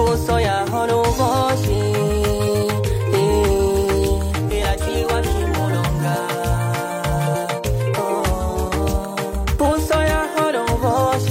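From 8.20 to 8.76 s the sound slows by about 5.6 percent and drops a full semitone, then snaps back to normal rate. This is a drift correction step, likely from clock-matching software briefly lowering playback rate to rebalance its buffer.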